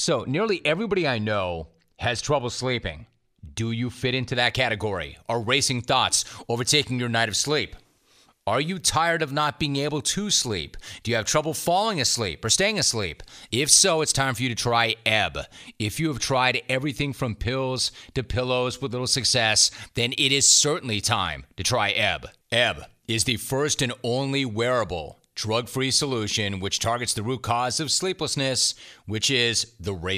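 Pre-emphasis left on from 4.35 s, just after "you fit into", through to the end of the clip. The treble was lifted before recording or transmission, and the matching de-emphasis cut was never applied on playback. High frequencies sit about 14 dB above 1 kHz at 10 kHz, a tilt that fits the 75-microsecond FM curve. The speech turns thin and glassy, with hissing, overbright sibilants.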